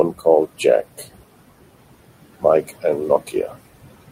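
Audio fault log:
Throughout: noise suppressor artifacts. The suppressor pulls down bands it judges to be steady noise by about 20 dB, frame by frame. The room noise, about 14 dB under the speech, dips between phrases and swells beneath them.
3.27 to 3.53 s: speech cut by the noise suppressor. Here the suppressor mistakes quiet speech for background and turns it down along with the noise, by up to about 13 dB. Around 150 ms in total sounds swallowed, with soft sounds fading out.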